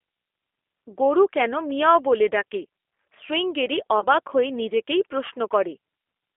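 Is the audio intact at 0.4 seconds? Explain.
No. The speech is coded throughout by a G.729 codec at what sounds like 8 kbit/s, so at 0.4 s it is confined to about 300 Hz–3.5 kHz and has a rough, synthetic edge.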